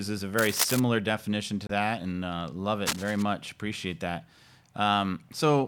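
Cable scratch noise appears from 0.38 to 0.80 s and again from 2.85 to 3.23 s: dense, uneven rustling bursts laid over the speech, only a few decibels quieter than it. The likely cause is a worn cable or connector being moved, its contact resistance fluctuating rapidly.

Damaged data in a compressed stream shows up from 1.65 to 1.71 s as a short glitch. Corrupted bytes there make the decoder misread frames and lose sync until it finds the next valid frame header.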